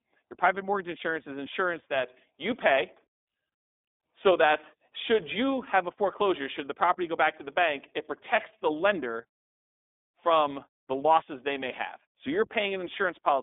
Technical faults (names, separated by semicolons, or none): iLBC codec